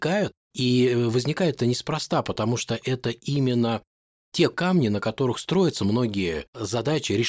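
No technical faults are audible.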